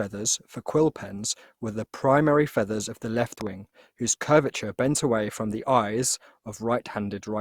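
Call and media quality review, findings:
Generation loss, whole clip: swirly, hollow speech with smeared attacks, worse than one encode would give. Likely several Opus passes, around four, and it sounds like roughly 64 kbit/s.

Loud pop, 3.41–3.49 s, after "feathers of the left", before "whose curvature bent away": double pop, about 10 dB over the speech. Likely a voltage spike from a plug, switch or driver glitch.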